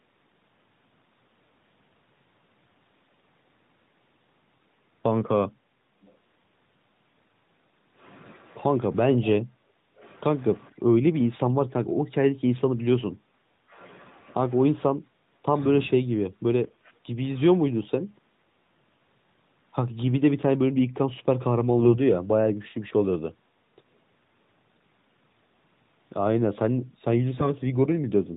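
At 21.8 to 22.0 s and again at 27.34 to 27.50 s, the speech turns hoarse and gargly. These are AMR bit errors. Around 7 percent of the less protected bits arrived flipped, so pulse positions and fine gain and spectrum values went wrong on the lightly coded narrowband mobile link.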